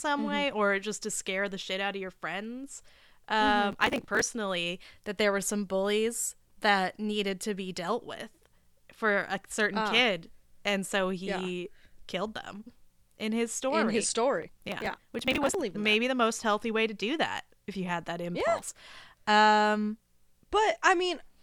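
Gritty bursts of crackle tear across the speech from 3.71 to 4.21 s, from 14.43 to 15.54 s (the longest), and briefly from 18.59 to 18.80 s. This is processor overload crackle: the processor fell behind and missed many buffer deadlines in a row. Each missed buffer was skipped outright, leaving a hard-edged dropout. The closely packed dropouts fit a buffer of around 5 ms. The crackle stops once the load eases.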